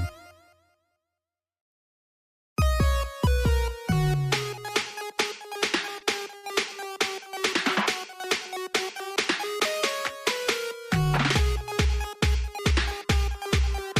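At 5.99 to 6.03 s, and again at 6.37 to 6.45 s, there is a short stall from a late packet. The jitter buffer ran dry, so the receiver held the last sound for about 16 ms, then 60 ms. Nothing is lost. The sound just lingers briefly, with a faint buzz or dip.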